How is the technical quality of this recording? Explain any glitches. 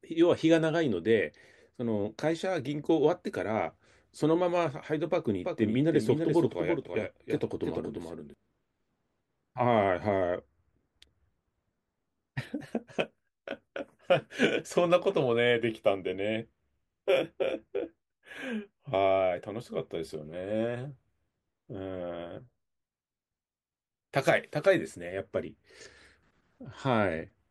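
The recording has one clear glitch: a doubled audio track from 5.44 to 8.34 s. The same speech was most likely captured a second time through a slower path, or held as two out-of-step copies in an edit, and both were mixed together. The second copy trails by roughly 300 ms at around 5 dB below the original, with no reverb or room colour. The result is a clean, slap-back repeat of each syllable that cuts in and out abruptly at those times.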